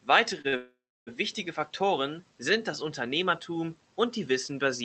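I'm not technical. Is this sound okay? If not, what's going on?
No. Near the start of this speech the sound catches twice in quick succession: once from 0.41 to 0.46 seconds and again from 0.48 to 0.55 seconds. Each is a short stall from a late packet. A piece of the call audio arrived late, so the receiving end held the last sound for about 28 and then 44 milliseconds until it came in. Nothing is lost, but the sound is briefly stretched, with a faint buzz or dip.

Right after that, from 0.57 to 1.09 seconds, there is a longer call audio freeze lasting about half a second. The last sound is drawn out into a fading buzz and then goes silent for roughly 0.3 seconds before the speech picks up exactly where it stopped. The likely cause is a burst of network delay that held back the incoming audio, leaving the receiver nothing to play. No speech is missing, but a gap has been inserted.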